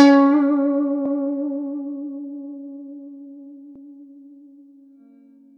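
At 1.06 s the music stutters, and again at 3.76 s. These are overlapping chunks. The audio was handled in 2.5 s blocks, each starting before the last had finished. So a 200 ms piece plays twice at every join, giving a brief repeated jolt.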